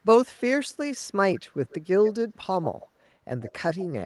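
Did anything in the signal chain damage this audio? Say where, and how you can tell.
Yes, at the call-processing stage. An echo leak appears at 1.69–1.75, 2.04–2.14, 2.62–2.87 and 3.41–3.86 s. A faint copy of the speech trails it by 136 ms. It sits well below the direct sound. The likely cause is a loudspeaker-side echo canceller passing residual pickup back.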